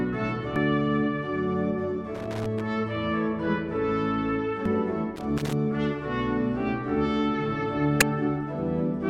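Damaged data in a compressed stream at 0.56 s produces a brief blip lasting only a few milliseconds. Part of the encoded stream is corrupt there, so the decoder misreads the affected frame and loses its place until it finds the next valid frame header. The same short glitch recurs at 4.66 s and at 8.01 s, each momentary rather than a sustained disturbance.

Loose connector crackle runs from 2.15 to 2.61 s and again from 5.16 to 5.53 s. These are irregular bursts of scratchy crackle, each roughly a third to half a second long. They come from a worn or dirty contact somewhere in the signal chain that rapidly makes and breaks as it shifts, chopping the audio on and off. Any DC present on the line adds pops at the breaks.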